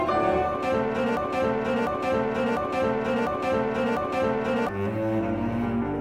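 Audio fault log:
1.17–4.69 s, broken-record loop. A fragment about 0.70 s long plays five times in a row, exactly, back to back. Each pass is identical, so the sound stutters in a fixed rhythm with no variation. The likely cause is a stall in the player, encoder or stream that kept resending the last fragment it held. Whatever should have been heard in those 3.5 seconds is missing, and normal audio resumes at the end.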